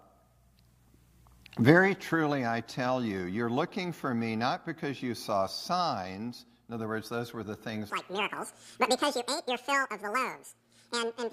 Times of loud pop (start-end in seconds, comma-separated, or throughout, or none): none